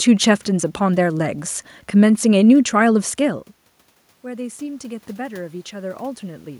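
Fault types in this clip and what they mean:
Automatic gain rising: from 4.23 to 6.52 s the voice and the room noise behind it swell together by about 6 dB. After the input level fell by about 18 dB, the gain control judged it too quiet and raised its gain gradually.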